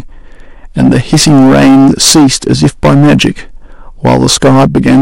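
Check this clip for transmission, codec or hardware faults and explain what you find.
There is one fault, hard clipping, present for the whole recording. The speech is driven about 16 dB past what a stage can pass, so roughly 15% of samples have flattened peaks. This gives a harsh fuzz on every loud syllable.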